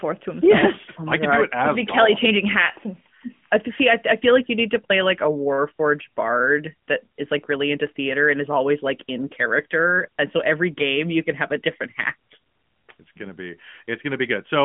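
No faults are audible in this speech: the AMR-NB narrowband link at 12.2 kbps passes roughly 150 Hz to 3.4 kHz as designed, with only light codec colouring.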